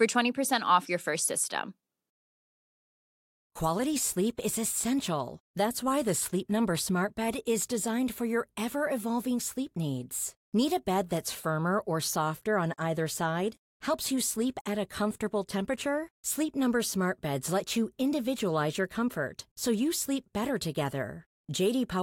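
Nothing stood out on listening to this speech recording.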